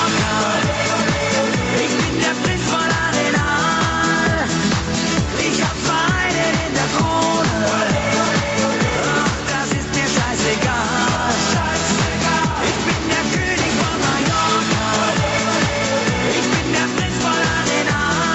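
Throughout, the input gain was likely set far too high, so a fast limiter or compressor keeps pulling it down, and this gain pumping makes the level swing around 5 dB.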